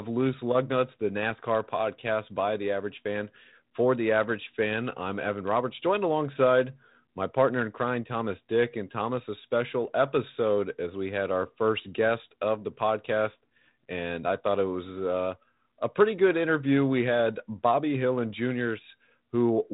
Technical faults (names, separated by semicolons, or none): none